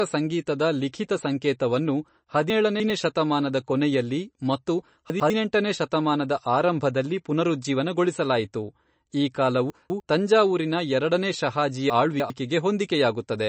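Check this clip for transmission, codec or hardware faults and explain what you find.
Two problems are audible: lossy compression across the whole speech clip, and four moments where short stretches of audio play in the wrong order.

MP3 compression, throughout: the encoder appears to have been starved of bits, likely from MP3 coding at a low rate that fits roughly 34 kbps. With too few bits it discards everything above 8.3 kHz and drops weaker frequency components, which flicker in and out between frames. The damage is plainly audible: the speech sounds dull and watery, sibilants turn swirly and metallic, and consonant onsets are smeared.

Chunks out of order, at 2.5 to 2.9 s, 5.1 to 5.3 s, 9.7 to 10.0 s and 11.9 to 12.3 s: in each case a segment of about 100 ms was delivered or written late and slotted in after material that should have followed it. Nothing is missing, but the sequence is scrambled and each misplacement leaves hard splices.

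The displacement sounds like three chunks at 2.5 s (after "ಸಂಗೀತದ ಲಿಖಿತ ಸಂಕೇತವನ್ನು", before "ಶತಮಾನದ ಕೊನೆಯಲ್ಲಿ ಮತ್ತು"). At 5.1 s it is one chunk (before "ಶತಮಾನದ ಆರಂಭದಲ್ಲಿ ಪುನರುಜ್ಜೀವನಗೊಳಿಸಲಾಯಿತು ಈ"). At 9.7 s it is two (before "ತಂಜಾವೂರಿನ ಎರಡನೇ"), and at 11.9 s it is three again. Each is heard as a brief jumbled moment.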